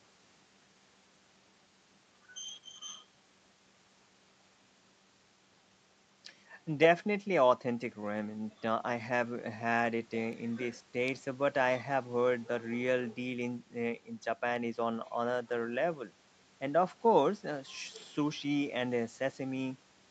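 No technical faults can be heard anywhere in the speech. The call microphone processing is audible only as a missing lowest bass and no content above 8 kHz, which is how that path normally sounds.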